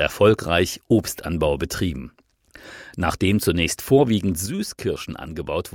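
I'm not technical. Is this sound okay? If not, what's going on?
No. At 4.46 s there is a sudden gain jump: the whole sound, background noise included, drops to about half its level instantly and stays there to the end. A gentle fade would ease down, but this falls in one step, likely from a volume setting changed without smoothing.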